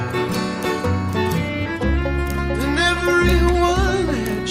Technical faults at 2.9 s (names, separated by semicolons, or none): none